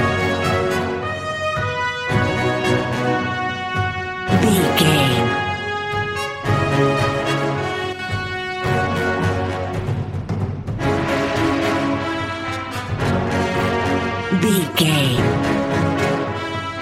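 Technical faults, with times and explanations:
7.93–7.99 s and 14.64–14.75 s, one channel drops out: the sound briefly falls about 6 dB, likely one stereo channel lost before the mono sum. The waveform shows short flat-topped dips in amplitude, and the spectrogram shows thin, uniformly fainter vertical bands across all frequencies.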